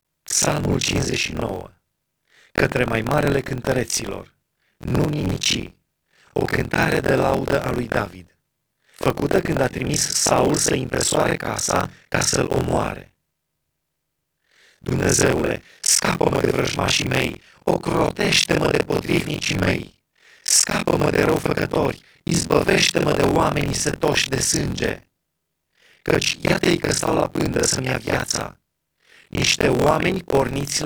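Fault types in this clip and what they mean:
Buffer tearing: the application writing the ring buffer and the hardware reading it have drifted out of step, so their positions cross inside every period. Roughly half of each buffer replays speech from about 50 ms earlier, spliced in with hard joins at both ends. This runs through the whole clip as a robotic rattle at about 43.1 Hz, which fits a 1024-sample buffer, and it drops away in the pauses between phrases.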